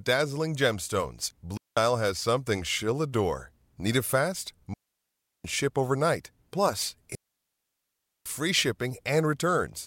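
At 1.57 s the speech drops into near silence for about 0.19 s, returning at 1.77 s. This is a digital wireless dropout. The receiver lost too much of the data stream and muted rather than pass garbage. The fades are very short, so each gap sounds like a clean hole. No noise burst surrounds it. A longer mute runs from 4.74 s to 5.44 s, about 0.71 s. The longest spans 7.15 s to 8.26 s, about 1.11 s.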